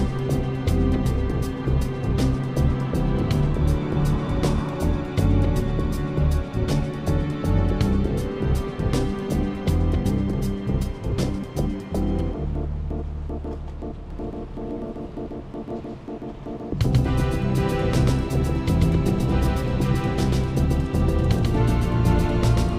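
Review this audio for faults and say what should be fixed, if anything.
Doubled audio track, 14.10 s to end: an equally loud copy abruptly starts trailing about 150 ms behind, likely from a slower second capture path or out-of-step edit copies. Monitor each source through one capture path only, and check edits so a single copy remains on the timeline.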